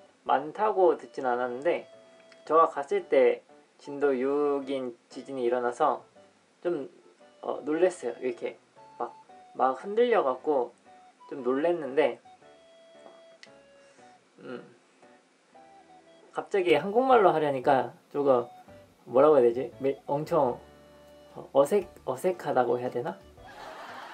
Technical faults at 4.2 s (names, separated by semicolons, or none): input switched to a poorer device